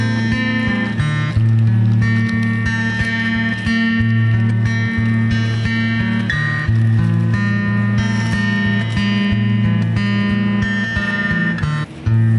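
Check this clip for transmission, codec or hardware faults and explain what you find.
One fault runs through the whole clip: a wrong sample rate. From start to finish the audio plays at about 0.726 of its proper speed and sits about 5.55 semitones low, which fits material recorded at 44.1 kHz being played back at 32 kHz with no rate conversion. Because the samples are simply clocked out too slowly, duration stretches and every frequency drops by the same ratio, so the sound is uniformly slowed, deepened and sluggish.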